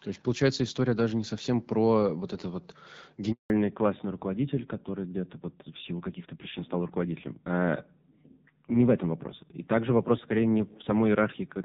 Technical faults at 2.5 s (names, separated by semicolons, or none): none